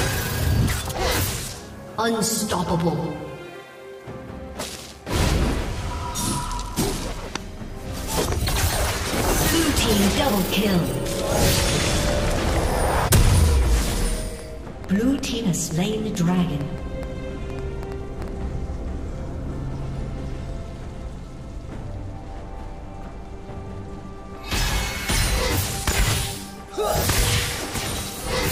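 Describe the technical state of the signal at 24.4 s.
At 24.4 s the signal is intact, with no fault audible at that moment.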